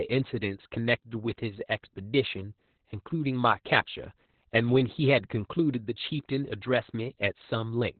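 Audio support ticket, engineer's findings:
Speech throughout: muffled, hoarse, slightly robotic; nothing above 4.4 kHz. Opus voice compression, narrowband SILK, fits about 8 kbps. Coarse excitation, not a plain low-pass.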